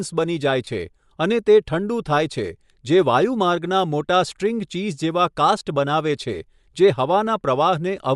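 Throughout the speech there is plainly audible Bluetooth LC3 compression, most likely from an LE Audio link. The upper spectrum sounds thinned and partly replaced by shaped noise, so sibilants and breath take on a grainy, hissy edge. The damage level fits a bitrate around 48 kbps on 10 ms frames. Unlike band-limiting or a simple low-pass filter, the top end is not just missing: it is filled with noise and has a rough, textured quality.

From 0.65 to 0.67 s, lost LE Audio frames cut out about 20 ms, the span of two frames. The decoder fills the gap by repeating the last spectrum with scrambled phase, so the sound becomes a brief noisy smear rather than a clean dropout to silence. A second, single-frame loss at 5.6 s, about 10 ms long, gives a shorter blur of the same kind. This concealment smear is what distinguishes these from clicks or plain gaps.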